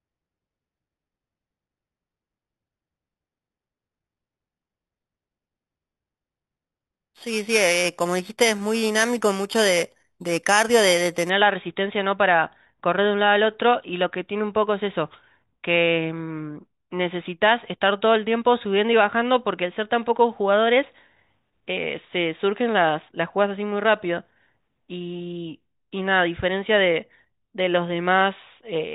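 For the first 11.3 s or so, the speech carries a bright, metallic fizz riding on top of it. That's imaging from sample-and-hold upsampling. The audio was brought up to a higher rate by just repeating samples with no smoothing filter, so a mirrored copy of the spectrum lands in the 4 to 8 kHz band, about 11 dB below the speech. That placement fits an 8 kHz original. The fizz tracks the speech's loudness, and its lowest copy moves against the pitch.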